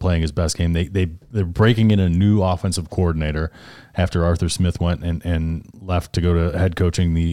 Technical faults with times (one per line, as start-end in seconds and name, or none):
1.83-5.50 clock drift buffer slips